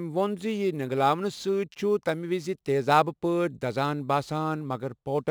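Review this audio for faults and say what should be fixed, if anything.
Crude rate conversion runs throughout the speech as a gritty, inharmonic fizz trailing louder and brighter sounds, roughly 30 dB down. Nearest-sample picking from 48 kHz to 44.1 kHz drops samples in a repeating 160-to-147 pattern, creating unrelated tones. Use a properly band-limited polyphase resampler instead.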